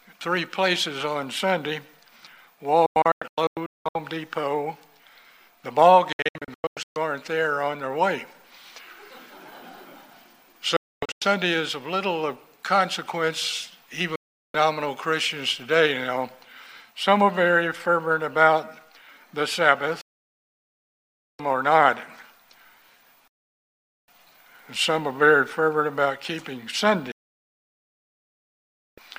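Seven digital broadcast dropouts occur, at 2.86–3.96 s, 6.12–6.96 s, 10.76–11.22 s, 14.16–14.55 s, 20.01–21.40 s, 23.28–24.08 s and 27.12–28.98 s. Each time the receiver stops getting decodable frames and mutes with a 3 ms fade. The holes come in steps that fit 32 ms frames. The first three break into several short gaps, with runs of up to 256 ms. The later ones are solid silences lasting from 0.38 s to 1.86 s, and the programme content during them is lost.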